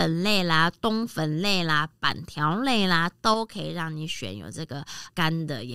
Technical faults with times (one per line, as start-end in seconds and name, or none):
3.34-5.75 sudden gain jump